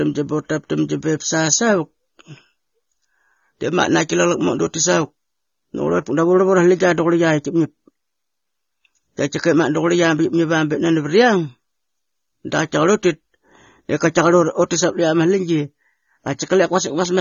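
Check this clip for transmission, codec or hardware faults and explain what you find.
There's one fault, and it runs the whole way through. The speech is dull and smeared, with nothing above 6.9 kHz, and the sibilants fizz. That's likely AAC compression: a low bitrate, around 24 kbps, forces the encoder to drop the top band and coarsely quantise the rest.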